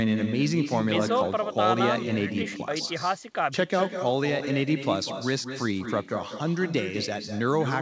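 Echo with no canceller runs throughout: the far end's speaker leaks back into its mic, so every phrase returns around a fifth of a second later, about 8 dB quieter.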